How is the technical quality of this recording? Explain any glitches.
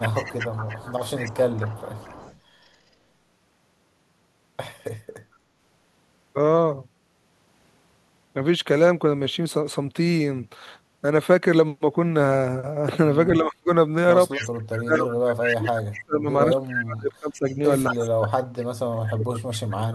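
The recording has clear problems. Two kinds of glitch appear: echo leak and speech suppressed in double talk.

Echo leak is heard from 0.0 to 2.39 s, from 14.31 to 15.57 s, and briefly from 17.89 to 17.94 s. A delayed copy of the speech trails the original by 231 ms. It sits about 20 dB below the speech at first, then rises to about 10 dB below. The likely cause is a far-end loudspeaker whose echo canceller let part of its microphone pickup return down the line.

Speech suppressed in double talk occurs from 13.4 to 13.7 s, from 14.57 to 17.59 s, from 17.91 to 18.1 s, and from 18.81 s to the end of the clip. In these spans the speech dips sharply, by roughly 30 to 40 dB at the deepest. The longest span loses about two seconds of speech in total. This is likely an echo canceller facing overlapping talk and turning down the wanted speech along with the echo.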